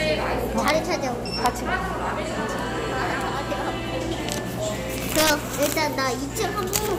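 Integer overflow cracks at 0.68, 1.46, 5.16 to 5.72 and 6.76 s. Peaks exceeded the limit by up to about 5 dB and wrapped to the opposite sign instead of clipping.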